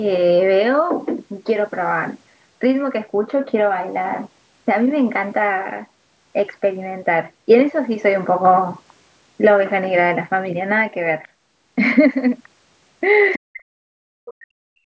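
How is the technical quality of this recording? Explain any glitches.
Two glitches sit at the very end of this speech recording. Both are call-processing problems, and both come in the last two seconds. The call microphone processing leaves nothing above 8 kHz.

At 13.33 to 13.39 s, the other side's voice leaks through. A brief scrap of a second voice appears, about 20 dB below the speech. It lasts only a few hundredths of a second. This is likely loudspeaker echo that the echo canceller failed to remove. The far end played out loud and reached the microphone again.

From 13.38 to 14.81 s, speech is suppressed in double talk. The talker's level drops sharply, by around 40 dB at its deepest. The suppression affects about a second and a half. The likely cause is both sides talking at once. The echo canceller could not tell the talker from the echo, so it turned both down together.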